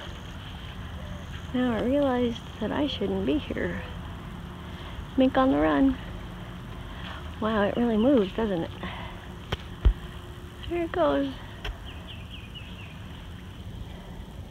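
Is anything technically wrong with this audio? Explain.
No, nothing technically wrong is audible here.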